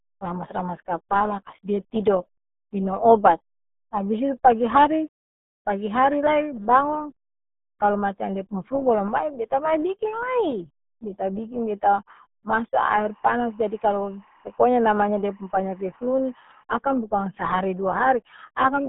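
Throughout the clip, the speech has been squeezed through the RealAudio 14.4 codec, at a rate that fits RealAudio 1's 8 kbit/s dial-up design. The band runs from 150 Hz to 3.6 kHz, with nothing above 3.8 kHz, leaving the speech muffled, gargly and heavily damaged.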